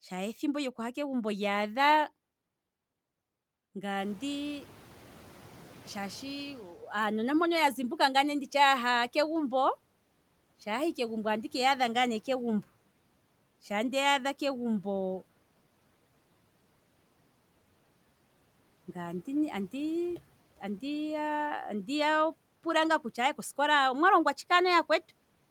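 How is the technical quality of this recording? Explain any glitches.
The speech recording has one glitch, noise suppressor catching up. Around 4 s the room noise jumps by about 20 dB, then sitting about 27 dB below the speech.

From 3.99 to 6.73 s the suppressor's noise estimate lags the jump, so noise passes less reduced, then sinks by about 8 dB over 2.74 s. It is a single gradual fade, not repeated pumping.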